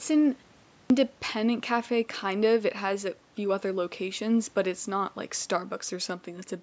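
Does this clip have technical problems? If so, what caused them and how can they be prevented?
Yes. At 0.78 s, after a 0.43 s pause, the speech returns with a clipped start: about 120 ms is lost up to 0.90 s, so the sound begins abruptly without its first sounds. The output device went to sleep during the short silence and needed time to wake before playing again. Muted pauses also silence the background, but speech resumes intact. Here the onset itself is missing. Keeping the output device active through silences, for example by disabling its power-saving idle mode, prevents this.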